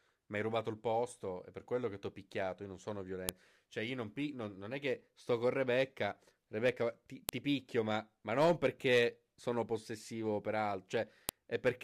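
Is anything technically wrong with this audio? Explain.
Yes. This is file header played as audio: 4-second pieces were joined without stripping their WAV headers, so those bytes play as samples. The result is a sharp, loud click at 3.29 s (just after "non sono"), 7.29 s (just before "ti picchio") and 11.29 s.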